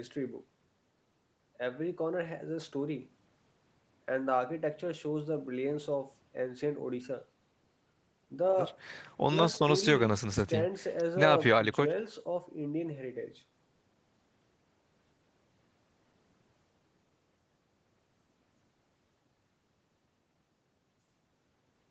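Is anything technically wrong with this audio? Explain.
No, nothing is technically wrong with this audio.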